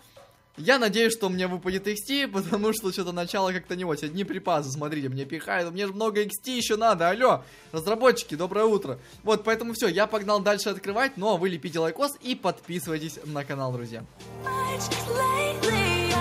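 No technical faults are audible anywhere in it.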